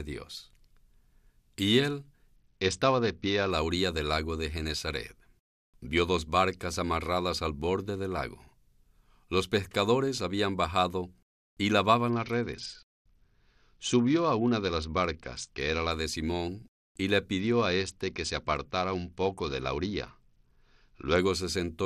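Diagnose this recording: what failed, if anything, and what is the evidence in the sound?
The failure is at the codec stage: a Bluetooth SBC bit pool drop, three times in this speech. From 2.36 to 3.51 s, ending just before "la orilla del lago", again from 12.10 to 15.91 s after "pescadores habían bajado y", and from 17.40 to 21.18 s after "y le", the treble goes dull and a gritty noise comes up. That fits the link squeezing the bit pool from 28 down to about 8 (near 72 kbps), starving the top sub-bands until the rate recovers.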